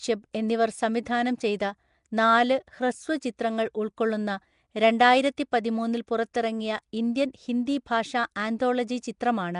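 A low-bitrate transform codec, most likely Nellymoser Asao, the old Flash microphone codec, has compressed this speech recording throughout. The damage is plainly audible, and the level of it fits a rate of around 44 kbps. The codec spends a small, fixed budget of bits on each short block and leaves weak bands unallocated, filling them with synthetic noise. As a result the voice carries a rough, hissy halo and a smeared, underwater character, and nothing remains above about 10.6 kHz. At 0.33 s there is a pre-echo. A sharp attack falls late in a coding block, so the quantisation noise sized for that loud onset spreads back across the block into the quiet moment just before it. It is heard as a brief hiss, about 10 ms long, running ahead of the attack and taking the edge off it.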